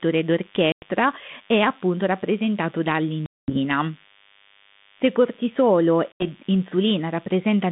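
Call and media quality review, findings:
DECT cordless phone buzz, throughout: thin steady 100 Hz buzz with dense harmonics, roughly 30 dB under the speech. Likely a nearby handset or base's 10 ms radio bursts rectified in the audio circuitry.

Packet loss on an ADPCM call at 0.72–0.84 s, 3.26–3.57 s (after "è appunto rappresentato") and 6.12–6.28 s: hard-edged silent gaps of about 100, 220 and 80 ms. Speech returns slightly distorted as the 32 kbit/s G.726 decoder's predictor and step size resynchronise with the sender's.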